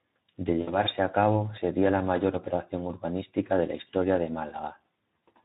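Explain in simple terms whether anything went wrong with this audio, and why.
Two things went wrong. The speech was squeezed through the Speex codec, an older voice-chat compression scheme, at a setting too low to carry the voice properly. Throughout the clip that leaves the speech plainly damaged: noisy and hoarse.

From 0.61 to 0.77 s there is VoIP packet loss concealed by the speech codec. About 60 ms of audio never arrived, and the decoder filled the gap by guessing from what came before. It smears into a fading buzzy or noisy sound, and the voice stays weak briefly afterward.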